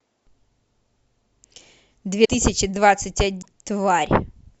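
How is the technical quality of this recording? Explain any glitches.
The speech is interrupted twice by short, frame-length disturbances, at 2.24 to 2.29 s and at 3.41 to 3.46 s. Each lasts about 52 ms, two frames of 26.1 ms, and the speech resumes further along than where it broke off. The likely cause is a broken MP3 bit reservoir: frames were cut out, so the frames that followed reached back for borrowed data and decoded bytes belonging to other frames. A plain dropout would leave a clean gap. Here, the damage spans whole frames and the audio skips forward.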